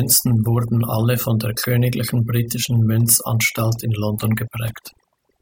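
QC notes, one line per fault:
Throughout, overdone noise removal: the noise reduction on this speech was pushed too hard, so any frequency band sitting close to what it took for the noise floor got pulled right down or switched off. The quieter parts of the voice went with them. That's why the background between phrases drops away and breaks up, with little twinkly specks fizzing in and out.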